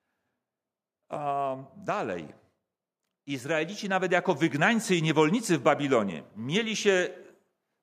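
From 3.25 to 5.57 s, automatic gain rising: the gain control judged the speech input too quiet and lifted it by about 7 dB, so voice and background swell together.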